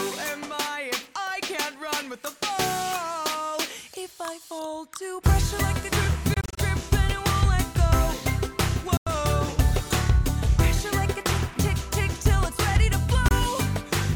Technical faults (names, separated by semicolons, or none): Bluetooth dropout